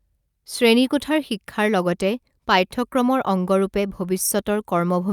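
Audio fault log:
No fault is heard anywhere in this speech clip.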